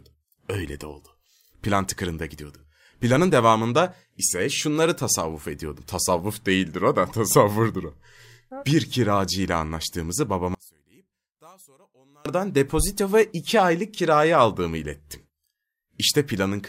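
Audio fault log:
10.55–12.26 s, one channel inverted: right after "kiracı ile anlaştığımızı" the voice falls by about 34 dB to a faint trace, then comes back before "depozito ve iki aylık". One side likely flipped polarity, so the centred speech cancels when summed to mono.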